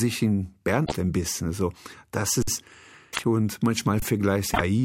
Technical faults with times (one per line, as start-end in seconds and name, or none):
0.82-0.92 damaged data in a compressed stream
2.42-2.47 underrun with held sample
3.10-3.19 damaged data in a compressed stream
4.00-4.02 underrun with held sample
4.50-4.61 damaged data in a compressed stream